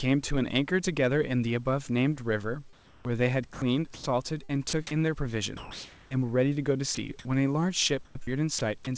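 From 2.73 to 4.73 s the speech is chopped by the voice detector, likely switching repeatedly between sending and pausing. About 0.61 s in total is replaced by comfort noise, so syllable edges drop out.

Between 5.57 and 6.11 s, comfort noise replaces the background. The real room noise, about 25 dB below the loud parts, gives way for 0.54 s to a smooth, featureless hiss about 1 dB quieter, likely because transmission paused during silence.

At 6.95 to 6.97 s, a 20 ms fragment of speech is dropped by the voice detector and filled with steady noise, likely because the detector misjudged a quiet moment as background. It is heard as a brief hole in the sound.

From 8.05 to 8.87 s the speech is chopped again, with about 0.18 s swapped for comfort noise, likely from the same on-off switching. Word endings clip. Throughout, the band stops at 8 kHz, which fits a G.722 call path at 64 kbps, and room noise sits about 39 dB below the speech.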